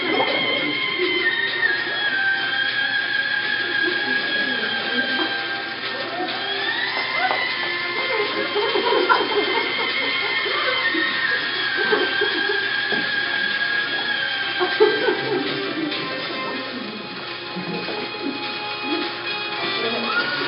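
No technical faults can be heard at any point in the audio.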